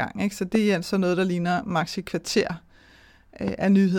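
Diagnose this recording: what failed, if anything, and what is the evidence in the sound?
Loud pops at 0.55–0.57 s, before "er altså noget der", and 3.48–3.50 s: single sharp transients over continuing speech, likely voltage spikes in analogue wiring.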